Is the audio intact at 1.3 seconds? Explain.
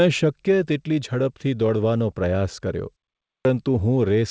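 Yes, the speech at 1.3 seconds is intact, with no fault at that moment.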